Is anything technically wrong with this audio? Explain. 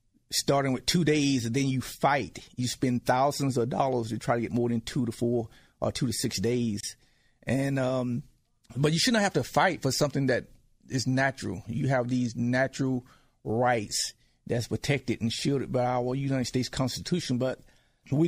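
Yes. At 6.81 to 6.83 s the speech drops out in a gap at a join of encoded pieces. The audio was encoded in separate sections and spliced without trimming, so the encoder's start-up delay and the padding on the final frame were left in. That leaves a gap of about 27 ms in continuous speech, with edges smeared by the codec, before the sound picks up exactly where it stopped.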